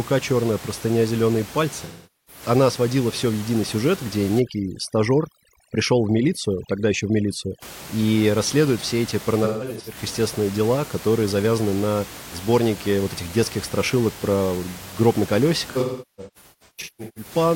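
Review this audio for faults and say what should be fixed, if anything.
AAC frame loss with concealment: smeared, noisy, phasey patches at 1.84–2.42 s, 9.44–9.97 s and 15.70–17.31 s. The decoder repeats the last good spectrum over missing frames. The last stretch loses about 1.15 s, with its longest run near 0.4 s fading toward silence. Protect the AAC stream with forward error correction or retransmission so frames arrive intact.

Overdone noise removal: from 4.40 to 7.62 s the background breaks up into twinkling specks. Overly aggressive suppression gates bands near the noise estimate, even though the room noise sits about 17 dB below speech. Lower the noise reduction strength so it removes less than the full noise estimate.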